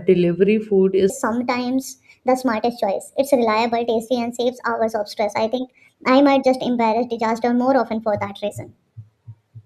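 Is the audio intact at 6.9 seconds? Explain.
No. A wrong sample rate fault runs from 1.10 s, just after "delivery food", to the end. The speech plays 1.38 times too fast and about 5.5 semitones high, which fits 32 kHz audio played unconverted at 44.1 kHz, so it sounds hurried and squeaky.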